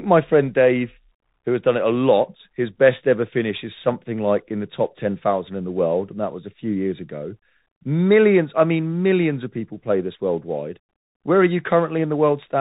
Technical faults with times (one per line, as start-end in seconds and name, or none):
0.00-12.61 Bluetooth CVSD headset codec